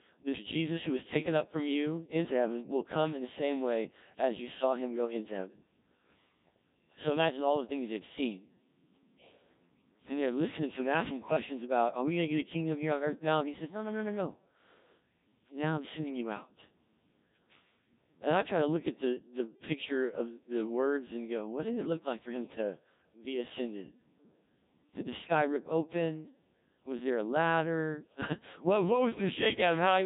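Codec 2 vocoder, throughout: speech is resynthesised from sine waves, sounding heavily robotic and buzzy, with nothing above 3.8 kHz, which fits a 1.3 kbit/s mode.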